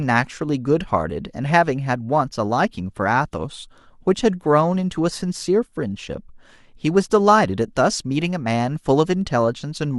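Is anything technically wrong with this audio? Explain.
No, nothing technically wrong stood out on listening to this speech recording.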